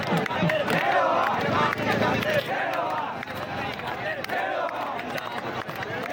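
A sudden gain jump at 2.4 s drops the audio's level by about 6 dB, and it stays at that lower level through to the end. The change is abrupt, from one sample to the next, with no fade, so the wanted sound and the background noise fall together in a single step. That points to a digital gain setting applied without a ramp, likely a one-bit shift, since halving the amplitude gives almost exactly this 6 dB step.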